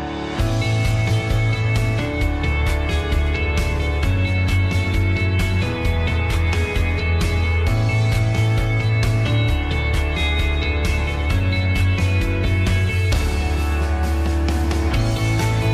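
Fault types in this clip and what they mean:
No audible faults of any kind appear in this recording.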